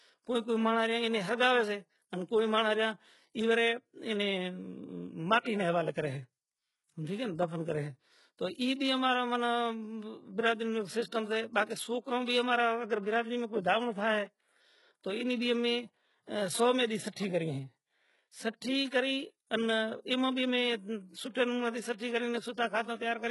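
From start to finish the speech has a gritty, metallic top end: sibilants sound lispy and artificial, and nothing reaches above 11.5 kHz. This is likely HE-AAC compression under heavy strain, consistent with a bitrate around 12 kbps. The codec carries only the lower spectrum and fakes the treble by copying lower bands upward under a coarse envelope, so the upper harmonics never line up with the real ones beneath the crossover.

Pre-echo appears twice. At 5.43–5.46 s, just before "نا ھوالے کرے", a short hiss of about 29 ms leads into the onset, which sounds softened and smeared. At 21.98–22.00 s, right after "امے سوٹھے نوں ماتے", a similar hiss of about 21 ms precedes the next attack. Each sharp onset falls late in a transform block, and the quantisation noise sized for the loud part spreads back over the quiet moment before it.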